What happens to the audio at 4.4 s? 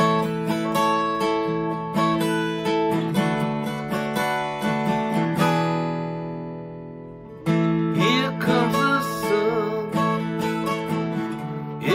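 Nothing goes wrong at 4.4 s; the audio carries straight through that moment without any dropout, click, glitch or other disturbance.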